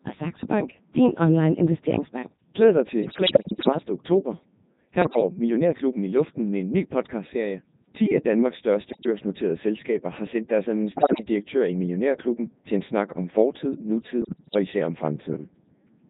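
From start to finish the speech sounds robotic and buzzy, with heavy damage, because a Codec 2 vocoder at 3.2 kbit/s rebuilds the voice from sine waves using only pitch, voicing, level and spectral shape. At 3.02 to 3.89 s, 5.02 to 5.28 s, 8.90 to 9.06 s, 10.92 to 11.28 s and 14.22 to 14.59 s, the voice breaks into bleeps, warbles and sudden pitch and level jumps. These are bit errors on digital voice radio: roughly 7 percent of bits flipped, about 4 percent in the last burst, corrupting each frame's parameters.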